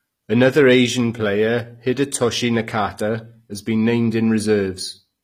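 From start to finish, the speech carries plainly audible coding damage, likely from HE-AAC compression: the treble above the crossover is synthesised from lower bands, so s sounds come out gritty and metallic, with nothing above 15.5 kHz, which fits a bitrate around 24 kbps.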